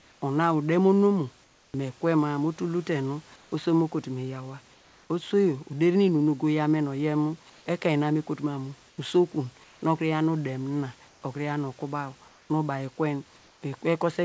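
In eight pauses the real room background drops out and is replaced by a flat, featureless hiss, slightly quieter (about 1 to 4 dB): 0.00–0.22 s, 1.44–1.74 s just before "mi kwe ma nu", 3.36–3.52 s, 4.74–5.10 s after "mo kotu me yawa", 7.50–7.66 s between "ogo yaw men oyen" and "ekein na me okotu", 8.90–9.82 s, 11.08–11.22 s and 12.28–12.50 s. This is comfort noise in place of the background, likely from discontinuous transmission: the sender went quiet in speech gaps and the receiver synthesised smoothed noise. The G.722 call path leaves nothing above 8 kHz.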